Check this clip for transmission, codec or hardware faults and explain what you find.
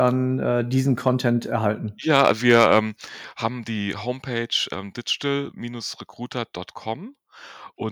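Two faults show up, both tied to the microphone's input level.

At 2.04 s, and again at 3.06 s just before "haben die", the level drops abruptly, by about 2 dB and then about 4 dB. This is likely the microphone volume stepped down by the call software.

From 2.14 to 2.79 s, peaks turn harsh and crackly, about 5 dB past the limit, with their tops flattened. Likely microphone overload, clipping at the converter.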